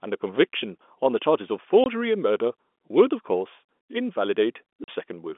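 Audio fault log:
1.84–1.86 s and 4.84–4.88 s: packet loss filled with silence. The speech simply vanishes for 20 ms, then for 40 ms, and the cut at each edge is hard. The receiver had nothing to play for those stretches and put in plain silence instead of smoothing over them. The lengths fit one lost 20 ms packet, then two in a row. The narrow 250 Hz to 3.5 kHz G.711 telephone band carries on unchanged either side of both gaps.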